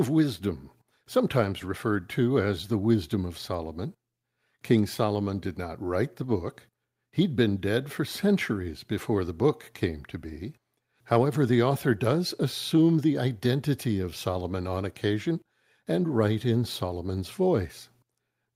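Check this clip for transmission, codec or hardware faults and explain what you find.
Nothing in this speech recording points to a transmission, codec or hardware problem; the signal holds steady and continuous throughout.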